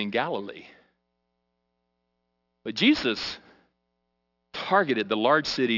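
Aliasing throughout: unfiltered energy above 6 kHz folds back at a fairly strong level, as a 12 kHz rate would produce. Sibilants turn gritty and metallic, and the spectrogram shows mirrored energy pressed hard against a 6 kHz ceiling.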